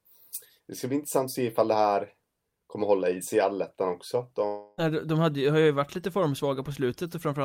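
Between 4.47 and 4.80 s, a likely long network dropout: the last sound stretches into a fading buzz, and about 0.3 s of speech is lost.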